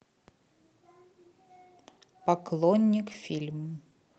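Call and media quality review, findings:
Scattered short gaps, 2.82–3.93 s in the speech: around seven brief ticks and smears, none longer than about 15 ms. Jitter buffer/packet loss concealment extends the last sound over lost or late packets, roughly 70 ms filled in total. Opus path adds coding noise, band-limited near 8 kHz.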